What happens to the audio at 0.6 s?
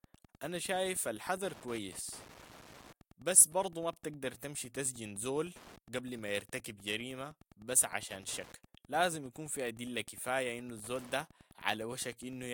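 At 0.6 s the speech carries Wi-Fi interference, present throughout the clip: a nearby radio's beacon, repeating every 102.4 ms, is rectified by the audio circuit into a steady ticking, about ten per second, roughly 25 dB below the speech. A spectrogram shows evenly spaced thin vertical broadband lines, and the waveform shows regular small spikes.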